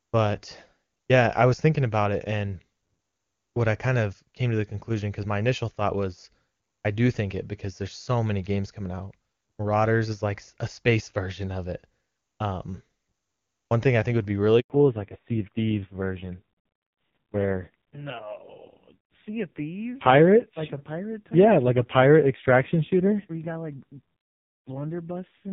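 A speech recording of a phone call, cut by a handover gap from 14.60 to 14.70 s, right after "think would be really". The audio fades out and stays silent for 100 ms while the call switches networks, and that stretch is lost. From 14.70 s to the end, a fallback to narrowband removes everything above 4 kHz, and the sound turns duller and rougher in a way that points to a low-rate narrowband codec. This replaces the clear, wideband HD Voice heard before the switch.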